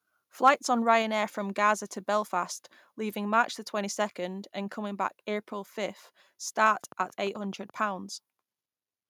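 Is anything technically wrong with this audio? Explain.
Yes. From 0.46 to 0.49 s the loudest peak in the speech turns briefly harsh and crackly, with the tops flattened. This points to microphone overload: the input level likely ran about 3 dB past the converter's ceiling, clipping a small share of samples.

From 6.75 to 7.71 s a train of clicks ticks evenly over the sound, about 11.7 per second, roughly ten pops in all, peaking near the level of the speech itself. Interference from nearby equipment or a faulty connection or power supply is the likely cause.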